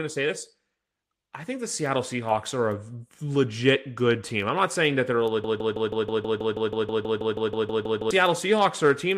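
A broken-record loop runs from 5.44 s to 8.11 s: a 0.16 s fragment of the speech repeats exactly, back to back, 17 times. The playback or stream likely stalled and kept resending its last buffered piece, so the speech that belonged there is lost.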